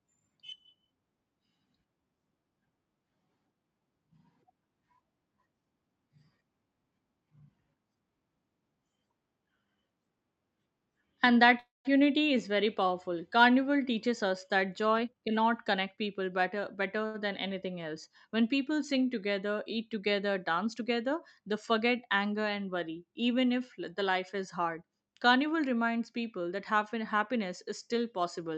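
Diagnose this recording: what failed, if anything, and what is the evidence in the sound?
A network-stage call audio freeze, most likely packets held up in transit until the jitter buffer ran dry, interrupts the speech from 11.59 to 11.87 s. The receiver carried the last sound forward as a fading buzz that drops to silence for about 160 ms, then resumes exactly where it stopped. About 0.25 s of gap was inserted, nothing was lost, and everything after it plays that much later.

Between 15.01 and 17.04 s there is a jitter buffer speed-up in call processing. The buffer held more than its target. To trim that excess delay, the receiver repeatedly cut pitch-period-sized slices, removing roughly a third of a second in total. The speech runs at about 112% of normal speed with unchanged pitch and sounds noticeably hurried.

Right after the speed-up, a short stall from a late packet occurs at 17.06 to 17.16 s. 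One packet was missing when it was due, so the buffer emptied again and the receiver stretched the last sound for about 83 ms until the packet arrived. No speech is missing, but a sound is held too long with a slight buzz or dip. All of this passes through an Opus call path at 64 kbps whose top end stops near 8 kHz.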